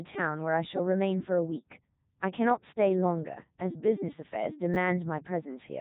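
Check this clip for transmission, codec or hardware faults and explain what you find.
Two faults are audible: a low-rate vocoder throughout, and a brief reordering of audio near the end.

Codec 2 vocoder, throughout: the speech is resynthesised from pitch, voicing, energy and a coarse spectral envelope rather than the original waveform. This gives a robotic, buzzy sound consistent with Codec 2's 3.2 kbit/s mode, with heavy damage. A spectrogram shows nothing above 3.8 kHz.

Chunks out of order, 4.74 to 4.76 s: a 10 ms chunk arrived one chunk late and played after the chunk that should have followed it. No audio is lost, but the sequence is scrambled, producing a short jumbled moment. The waveform shows abrupt discontinuities at the joins.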